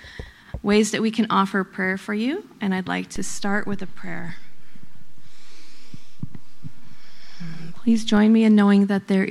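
At 3.16 s the zero line of the waveform jumps, which is a DC step. The baseline shifts by about -24 dBFS, the sort of thing you get when a converter recalibrates or an input carrying an offset gets switched in. The offset holds until 8.17 s, where it steps back. You hear each of those two jumps as a low thump or click, while the sound itself carries on unchanged across them.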